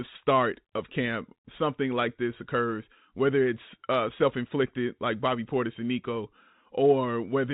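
Speech over a phone-band call line; no faults heard.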